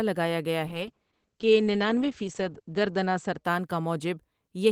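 A call bitrate drop runs from 0.72 to 3.91 s. The coarse, watery coding points to the encoder falling from 32 to 10 kbps and bottoming out for 1.88 s. The band above 8 kHz vanishes, muffling the speech until quality recovers.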